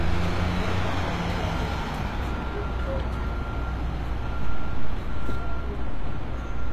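From start to finish the top end of these sounds has a gritty, metallic sheen, and nothing at all comes through above 14.9 kHz. That's the signature of HE-AAC compression, likely at a low rate, in the region of 24 kbps. The treble here is being rebuilt by copying lower bands upward, so it stays bright but the upper harmonics don't line up with what's below, and the damage is plainly audible.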